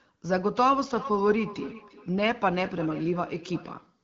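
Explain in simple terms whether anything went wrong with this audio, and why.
Something went wrong from 0.91 to 3.78 seconds: a feedback echo between two devices. Two devices in one room share the call. One plays the other's sound, and that microphone catches it again. So the speech comes back about every 0.4 seconds, fainter than the original.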